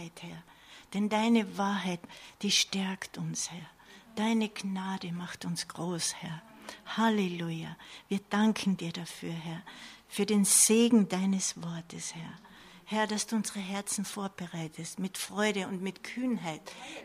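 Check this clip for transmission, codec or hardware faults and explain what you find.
One fault turns up, a brief stretch of channel delay (comb filtering).

Channel delay (comb filtering), 11.41 to 12.47 s: one channel runs late by about a single sample, roughly 0.02 ms, and the two are summed to mono. Because the offset is so tiny, the first cancellation lands around 20 kHz, right at the top of the audible band. What you hear is a slight dulling, with the highest air and sheen thinned out by a fixed notch, rather than an obvious hollow or phasey colour.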